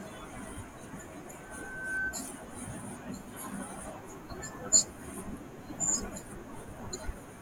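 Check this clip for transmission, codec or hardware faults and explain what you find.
One fault is present, a loudspeaker feedback squeal from 1.37 to 2.24 s. A 1.5 kHz tone swells over most of a second until it sits a few decibels above the speech, because the microphone is re-amplifying its own loudspeaker. That gradual build-up at one frequency sets it apart from a steady interfering whistle.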